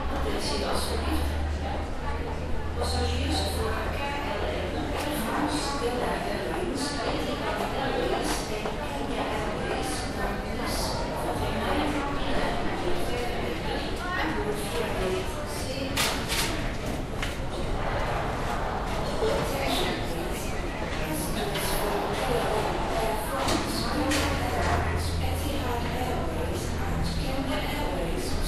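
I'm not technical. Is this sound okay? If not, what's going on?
No, not quite. The whole recording sounds dull and muffled from start to finish. The top end is missing, as if a blanket were over it. Behind the sound there is a gurgling, grainy roughness. The brightest parts seem to flicker in and out. This is likely MP2 compression. That older digital format saves space by splitting sound into slices and dropping the highest ones. It stores the rest crudely. Here it was squeezed too hard.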